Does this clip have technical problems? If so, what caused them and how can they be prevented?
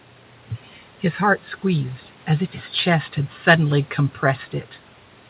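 No, nothing stood out as a problem on listening to this speech, which has the narrow, telephone-like bandwidth of a G.711 call path, with nothing above about 4 kHz.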